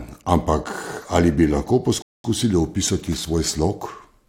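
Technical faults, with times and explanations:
2.02–2.24 s, rebuffering stall: right after "ampak ali bi lahko" the speech drops to dead silence for about 0.22 s, then picks up exactly where it left off. The player ran dry of downloaded audio and waited, so nothing's missing, just extra time inserted.
3.05–3.30 s, loose connector crackle: a quarter-second burst of irregular scratchy crackle over the speech. That's a worn or dirty contact shifting and rapidly making and breaking, chopping the signal on and off.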